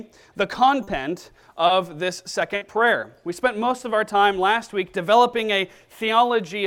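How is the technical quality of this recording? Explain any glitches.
Three packet-loss glitches occur in the first three seconds.

Short concealed packet loss at 0.83 to 0.89 s and 1.67 to 1.71 s: about 40 ms and 20 ms of audio failed to arrive in time, so the receiver extended the preceding sound to bridge each hole before blending back. Each is heard as a brief smear or wobble.

A burst of packet loss at 2.55 to 2.63 s: roughly 60 ms of consecutive data went missing. The decoder kept extending the last sound while fading it down, producing a short held buzz or dying hiss, then jumped ahead with that stretch absent.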